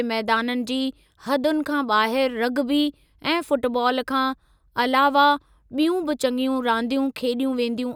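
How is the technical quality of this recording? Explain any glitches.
No technical faults or glitches are audible anywhere in the recording.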